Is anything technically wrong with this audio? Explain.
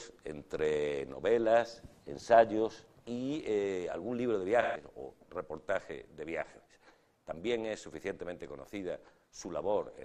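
Yes. From 4.62 to 4.85 s there is AAC frame loss with concealment. The decoder rebuilt the gap, which fits about three missing frames, from earlier spectrum, leaving a smeared, phasey patch.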